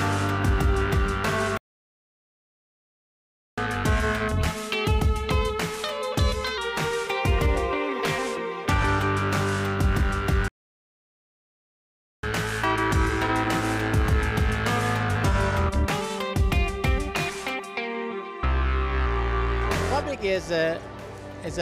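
At 1.57 s the sound cuts out for 2.0 s, a playback stall, likely the player running out of data. It resumes at 3.58 s. A second stall, likely from the same cause, silences the output from 10.48 s to 12.23 s, about 1.75 s.

Each stall is followed by catch-up at higher speed, from 3.58 s to 6.58 s and again from 12.23 s to 15.23 s. To recover the lost time, the player resamples its backlog at 1.1 times normal speed. Tempo and pitch both rise by about a semitone and a half, then settle back.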